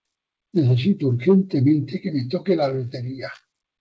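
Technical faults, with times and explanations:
The sound comes through a WebRTC call path with nothing above 8 kHz, which fits a wideband G.722 link running at 64 kbps, and no technical faults can be heard in it.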